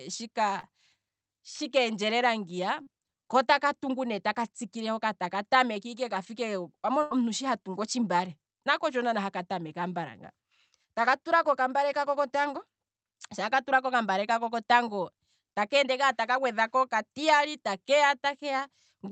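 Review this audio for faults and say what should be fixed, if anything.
Short concealed packet loss at 0.59 to 0.66 s and 2.83 to 2.90 s, the second between "keendjelela ngiya" and "kootaka tungu ne taka". Each time about 40 ms failed to arrive, and the receiver extended the preceding speech and then blended back, leaving a brief smear.

A burst of packet loss at 7.03 to 7.14 s, just before "shi hatungu otshimbale nako", removed about 80 ms. The decoder prolonged the last sound while fading it out, so it comes across as a held, dying tail before the speech picks up again with that span lost.

Both faults occur on a call path whose audio is band-limited at 8 kHz, and both could be prevented by improving network stability and enabling in-band forward error correction or a larger jitter buffer.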